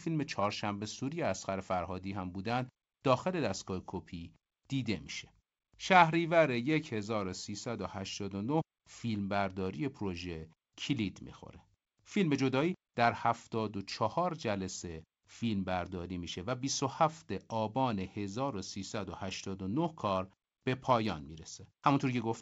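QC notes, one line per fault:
No faults heard in this speech recording.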